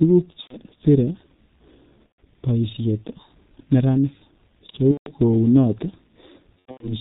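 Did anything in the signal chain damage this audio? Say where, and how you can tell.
Yes. Throughout, the G.723.1 codec at about 6.3 kbit/s has heavily damaged the speech: nothing above 4 kHz, hoarse texture, smeared consonants. Unlike plain band-limiting, the slow-updating voice model blurs fast changes, which points to a low-rate codec stage.

VoIP packet loss concealed by the speech codec occurs at 0.41–0.57 s, 2.06–2.18 s, 4.91–5.13 s and 6.60–6.93 s. The decoder extrapolates from the last pitch and filter into a buzzy tone or coloured noise that fades. The gaps run 90, 120 and 150 ms, fitting whole 30 ms frames, and the last scatters about 180 ms over 210 ms. Unlike dropouts, these gaps are filled at first, then muted from the third lost frame in a row.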